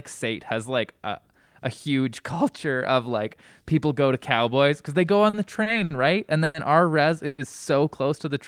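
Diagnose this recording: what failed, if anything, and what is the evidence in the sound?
Three brief hitches fall between 5.29 and 5.93 s: at 5.29–5.36, 5.63–5.69 and 5.84–5.93 s the speech sticks on one sound and holds it with a faint buzz for about 40, 30 and 60 ms, then carries on with nothing skipped. This is a short stall from a late packet at the network and jitter-buffer stage. Each packet arrived after its playout time, the buffer ran dry, and the receiver stretched the last sound until the packet turned up. Playback then runs that much later.

Two longer holds follow, at 6.44–6.57 and 7.26–7.41 s. The speech stops moving forward and the last sound smears into a fading buzz for about 100 and 120 ms. It never drops to silence, and the speech resumes exactly where it paused. This is a call audio freeze, likely caused by packets being held up in transit long enough to empty the jitter buffer. 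The receiver fills the wait with a decaying continuation of the last sound, inserting a gap rather than losing any audio.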